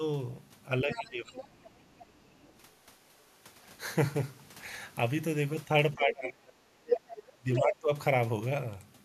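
A speech clip with two related faults. Speech is suppressed in double talk from 0.84 to 1.8 s and from 5.95 to 7.92 s. The talker dips by about 20 dB, then by about 35 dB. The echo canceller likely could not tell both voices apart and ducked everything. The other side's voice is leaking through at 0.91–1.04 s, 1.26–1.44 s, 1.63–2.59 s, 6.1–6.14 s and 6.91–7.22 s. Most scraps sit well below the talker. The last one is about as loud as the speech. Residual loudspeaker echo the canceller missed is the likely cause.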